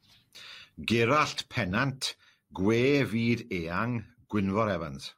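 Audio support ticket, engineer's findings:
No faults found in this speech recording. Nothing to flag against any component on listening.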